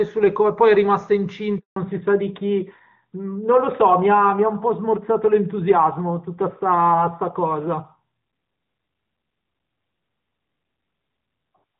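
A speech recording of a phone call, carried at first as HD Voice over the AMR wideband codec. The opening second and a half is clear and full, with only faint codec colouring, which fits one of the higher AMR-WB rates. At 1.58 s there is a handover gap: the voice cuts out and stays silent for 180 ms until 1.76 s, as the call is passed from one network to another and no speech frames reach the listener. Unlike packet loss on a steady link, nothing is concealed or smeared. There is a true hole and a clean restart, and the sound that comes back is different. From 1.76 s to the end the call shows a fallback to narrowband. Nothing above 4 kHz remains, so sibilants lose their edge and the voice turns duller and rougher, which points to a switch to AMR-NB at around its top rate. The change is abrupt and tied to the handover, and the new codec's coarser texture separates it from a plain low-pass filter, which would only darken the sound.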